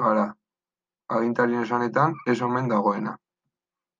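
Nothing stood out as a technical problem when listening through the recording.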